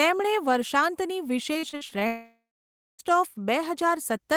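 From 1.53 to 2.03 s the speech breaks up into repeated packet loss with a choppy, robotic edge. About half a dozen short holes, the longest around 42 ms, get patched by stretching the previous sound, so roughly a third of that half-second is filler.

Right after, from 2.07 to 3.01 s, comes what is likely a long network dropout. Nearly a second of speech never arrives. The last sound smears on briefly as a fading buzz, then about 0.6 s of silence, and the voice resumes past the gap.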